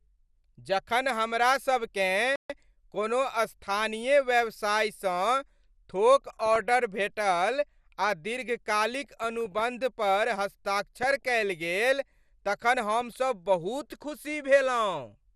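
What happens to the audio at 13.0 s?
Around 13.0 s the sound breaks into a brief bubbling, squelching churn, with individual frequency bands chirping and jumping in level as if the audio were passing through mud. This is DAB burbling, running from 12.78 to 13.15 s, just after "कयल गेल तखन". Bit errors at a rate of roughly a few tenths of a percent have slipped past error correction into the MPEG audio data, so corrupted samples put short blips of noise into single sub-bands and corrupted scale factors make sub-bands leap up or down for up to a frame.

Underneath that burst, and at this moment as everywhere else, the sound is dull and gurgling and granular, with the upper range thinned and flickering. This is plainly audible MP2 compression. The encoder divides the signal into 32 equal sub-bands and shares out a tight bit budget, so upper bands drop in and out and the remaining ones are coarsely quantised. 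The degree of damage fits a rate around 80 kbps, which is the likely cause.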